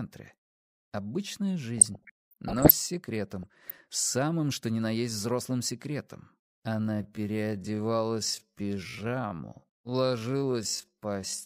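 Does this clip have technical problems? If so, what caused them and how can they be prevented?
Yes. Between 1.78 and 2.74 s and again between 3.43 and 3.94 s there is DAB burbling: short blips of noise in single sub-bands. Weak reception let bit errors, at a fraction of a percent, slip past error correction into the MP2 audio data. Stronger reception through a better antenna or placement prevents it.

From 6.61 s to the end there is a time-stretched section: the pace drops to about 0.56 times normal while the pitch stays put, leaving the audio dragging. The likely cause is software stretching the audio to fit a length by repeating short pieces. Keeping the original timing rather than forcing it into a fixed slot prevents it.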